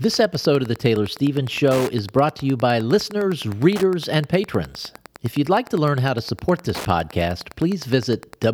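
Wi-Fi interference runs through the whole speech clip as a steady ticking, roughly ten ticks per second, sitting around 20 dB below the speech. A nearby Wi-Fi radio is sending its beacon every 102.4 ms, and a stage in the audio circuit rectifies those radio bursts, turning each one into an audible click. The ticks keep their regular rhythm regardless of what the speaker is doing.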